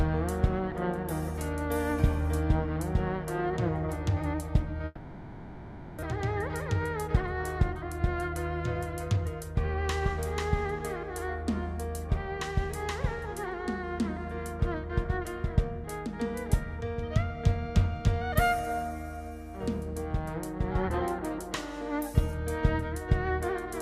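From 4.85 to 6.04 s the sound turns into a fading synthetic continuation, with about one second of audio missing afterwards, likely a long network dropout concealed by the receiver. A jitter buffer speed-up follows at 6.16 to 7.17 s (105%) and 7.69 to 8.00 s (112%), trimming short pitch-period pieces to shed the built-up delay. The sound runs briefly hurried at unchanged pitch.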